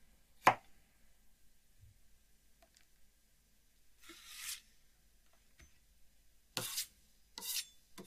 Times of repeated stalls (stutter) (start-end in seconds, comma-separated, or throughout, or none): none